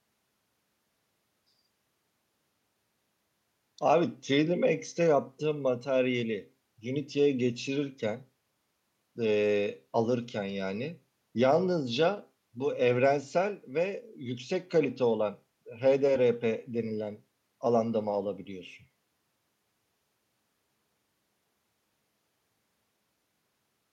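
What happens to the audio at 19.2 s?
Nothing goes wrong at 19.2 s; the speech runs on intact through that point with no fault to be heard.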